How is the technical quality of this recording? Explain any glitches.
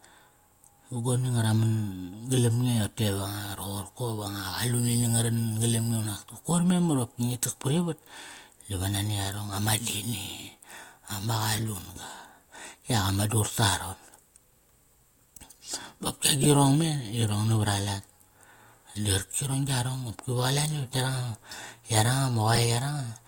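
The speech has one recurring problem: five brief decoding glitches. A corrupt frame decoded fault occurs at 9.90 to 9.96 s, 11.55 to 11.68 s, 16.41 to 16.46 s, 21.51 to 21.60 s and 22.53 to 22.58 s. Flipped bits in a few compressed frames were played as if valid, so misread gains and codes put energy at the wrong frequencies. Each one sounds like a short chirp or noise blip lasting a few frames. The one at 16.41 s stands out most, peaking near -10 dBFS.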